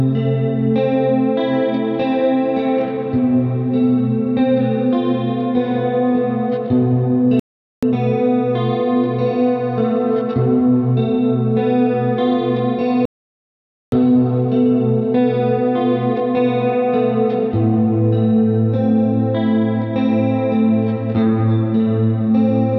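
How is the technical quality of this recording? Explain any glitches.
The recording has two playback stalls. At 7.40 s the everyday sound stops dead for 0.43 s, and at 13.05 s for 0.87 s, then resumes. The player likely ran out of data or was blocked, leaving silence until it recovered. Unlike a millisecond dropout, each gap is long enough to register as a clear pause in the flow.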